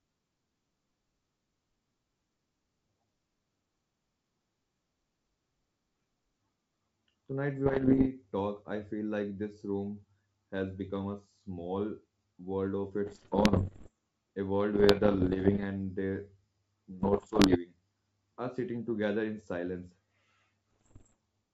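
Bit errors on the ADPCM link of a G.722 call, at a rate of roughly one to two percent, throw the decoder's step size and predictor off track. Each error rings on briefly, so this speech clip has bursts of pops and rough, level-jumping distortion at 7.66–8.09 s (ending just before "talk I feel like"), 13.06–13.91 s (after "world of"), 14.74–15.65 s (after "a world", ending before "and the"), 17.00–17.58 s and 20.71–21.15 s. The G.722 wideband coding underneath sounds clean, which fits its 64 kbit/s mode.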